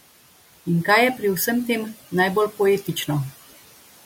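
Noise suppressor artifacts run through the whole speech clip: the suppressor pulls bands it judges to be steady noise down by about 16 dB frame by frame, so the room noise, sitting about 18 dB under the speech, drops away in pauses and returns beneath each phrase.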